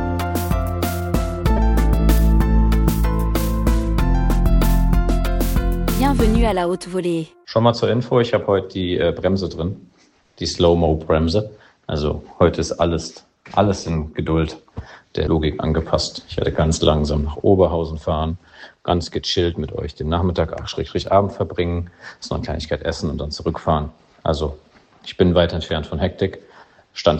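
At 1.56 to 1.59 s a corrupt frame is decoded: flipped bits in a few compressed frames were played anyway, scattering energy into wrong frequencies. Unlike a dropout's silence or a click's single tick, it sounds like a brief, fairly loud chirpy burst.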